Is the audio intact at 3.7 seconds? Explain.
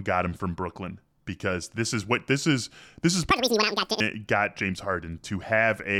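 No. Audio read two samples at a time (double speed) runs from 3.30 to 4.00 s, just after "this is this is". Consecutive sample pairs are taken as single frames, so the speech plays at twice the speed and 12 semitones higher.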